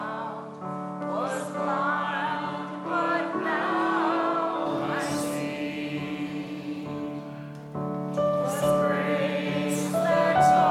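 Input switched to a poorer device, from 0.0 to 4.66 s: the audio there is band-limited, with nothing above 11.5 kHz, and carries a faint added noise floor, likely from a different microphone path. At 4.66 s it opens up again without a gap or level jump.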